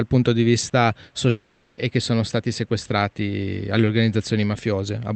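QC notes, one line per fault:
1.29–1.79 s, long network dropout: for about half a second the sound turns into a smeared, buzzy continuation of what came just before, fading across the gap instead of falling silent, and then the audio resumes with that stretch missing. Packets most likely stopped arriving, and the receiver's concealment filled all 480 ms with synthetic audio built from the last good frames. The surrounding top end stops near 8 kHz, which fits an Opus call codec.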